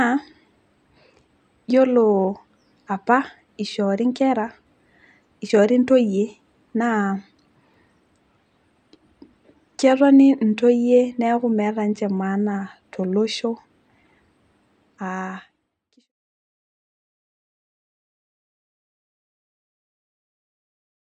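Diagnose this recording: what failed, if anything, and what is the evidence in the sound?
Nothing in this speech recording points to a failure at any stage of the chain. The only level change is a smooth fade-out that begins at roughly 14 or 15 seconds and reaches silence at 16.1 s, with no click or hard edge, as an editor would apply it.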